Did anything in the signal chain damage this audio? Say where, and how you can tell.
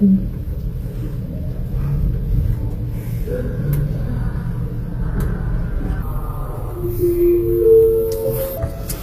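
Yes. HE-AAC compression at the codec stage, throughout: nothing above 14.9 kHz and gritty, metallic treble, likely rebuilt from copied lower bands at a bitrate near 24 kbps.

Section at the wrong speed, 6.02 to 8.57 s, in editing or playback: it runs at 0.807 times speed and drops about four semitones, likely from a mismatched clock.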